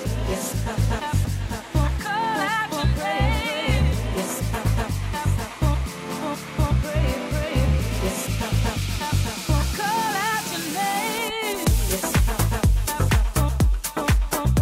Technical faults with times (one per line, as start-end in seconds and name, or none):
1.00-1.50 chunks out of order